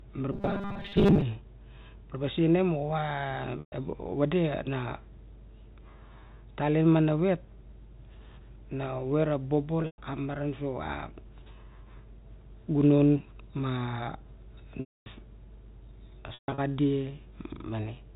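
Robotic sound from repeated short buffers runs from 0.32 to 1.23 s: a rigid 200 Hz buzz, likely from audio arriving too seldom and most of it being replaced by repeats of a 5 ms slice. Packet loss with pitch repetition follows at 3.6 s (120 ms gap), 9.82 s (140 ms scattered over 160 ms, just before "maran so a"), 14.8 s (260 ms) and 16.34 s (200 ms over 240 ms). The last pitch period is repeated, so each gap starts as a briefly held buzzy note that fades into silence before the speech returns.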